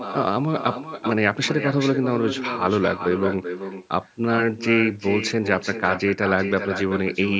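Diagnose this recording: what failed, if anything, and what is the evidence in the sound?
Echo with no canceller, at the call processing stage, runs through the whole speech recording. Each phrase returns roughly 0.4 s later, about 9 dB quieter and thinner. The far end's loudspeaker feeds its microphone, and nothing cancels that returning copy.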